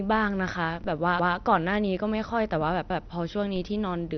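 Speech, with the audio system at fault in three ways. A low-rate encode, likely MP2 compression at around 48 kbps, has starved the upper sub-bands, so nothing survives above 6.1 kHz, and the speech sounds dull and gurgling throughout. Twice the zero line of the waveform jumps and then decays away, a DC step heard as a low thump at 0.84 s and again at 3.56 s. A repeated buffer occurs twice, when fresh audio arrived late and the device replayed its last 171 ms block (consistent with an 8192-sample buffer). Each segment sounds one extra time with a hard join, giving a stutter at 1.20–1.37 s and at 2.90–3.07 s with essentially no audio lost.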